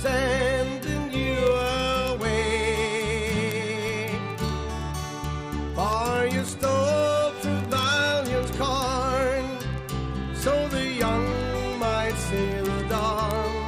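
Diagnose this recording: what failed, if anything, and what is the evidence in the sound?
Word clock ticks run from 0.12 s to 13.6 s, at the digital link into the converter. Sharp ticks repeat roughly every 50 ms, around 300 in all. The receiver runs unlocked on its own clock, roughly 500 ppm off. Each slip drops or repeats one sample.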